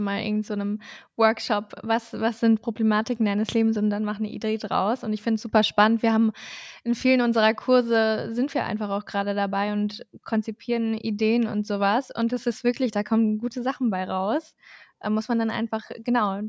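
No technical faults can be heard anywhere in this speech recording. Nothing in it points to trouble at any stage between capture and playback.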